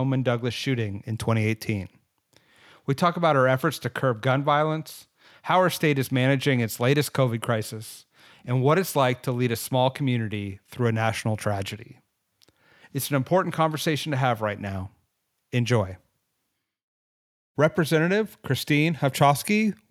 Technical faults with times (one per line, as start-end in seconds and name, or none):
none